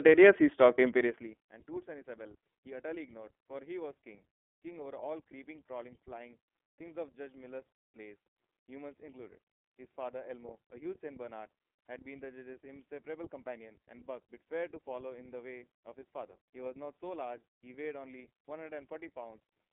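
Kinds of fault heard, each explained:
iLBC codec: throughout the clip the speech is confined to a narrowband line of 250 Hz to 3.4 kHz, so it sounds thin with no top end, and the coding damage is plainly audible as a rough, slightly synthetic grain. The codec rebuilds the excitation of each 30 ms frame independently, without drawing on the previous frame, and the texture fits its roughly 13 kbps mode; the gradual level changes come through this coding intact.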